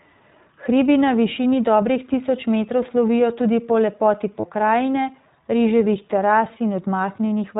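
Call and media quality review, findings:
iLBC codec throughout: speech band-limited, nothing above 4 kHz, with a slightly rough, synthetic edge that's plainly audible. Narrowband VoIP coding of each frame on its own; sound fits the 15.2 kbps, 20 ms frame mode.

Lost iLBC frames, 4.40 to 4.46 s: brief held, buzzy vowel where the signal drops out. Decoder concealment repeating the last pitch cycle with noise, consistent with roughly two dropped 20 ms frames; voice snaps back right after, since frames decode independently.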